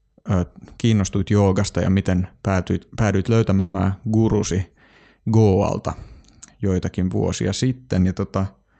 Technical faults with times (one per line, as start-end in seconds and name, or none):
3.59-3.76 call audio freeze